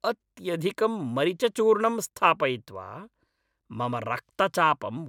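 No technical faults are audible.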